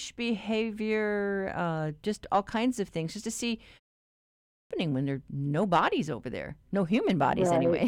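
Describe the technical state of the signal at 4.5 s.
At 4.5 s the output device is still waking from the preceding 0.42 s pause, so from 4.13 to 4.71 s about 0.58 s is swallowed: a clipped start after a pause, with speech resuming abruptly, missing its opening sounds.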